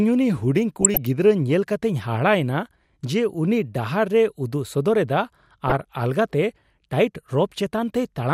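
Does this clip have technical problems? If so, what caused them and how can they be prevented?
Yes: DAB burbling at 0.81–1.07 s and 5.68–5.81 s. Uncorrected bit errors corrupt MP2 sub-bands, giving short noise blips rather than silent gaps. Stronger reception prevents it.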